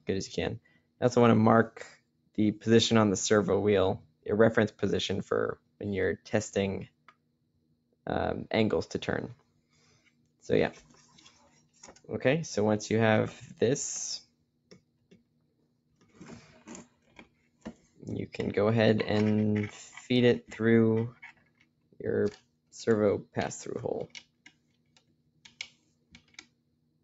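A noise suppressor built for speech stays active for the whole clip and has been applied to non-speech material. It treats sustained tones, ambience and decaying tails as background noise and pulls them down, while transients pass through largely intact. The gain therefore swings by something like 15 dB as the material moves between held and percussive content, and the sound pumps and thins, with sustained parts sinking and fading tails shortened.

The moments where the noise suppressor cut the sound most heavily fall at 0.0 to 2.38 s, 3.99 to 8.06 s, 9.35 to 12.09 s, 13.52 to 18.06 s, and 20.42 s to the end. In each stretch the suppressor clamps down by as much as about 18 dB. In the first window roughly a second of material is affected, in the second and third about two seconds each, and in the fourth about three seconds. Held passages drop away and decays cut off early while attacks stay audible. 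The result is a gated, fluttering quality over an upper limit near 8 kHz set by the call path.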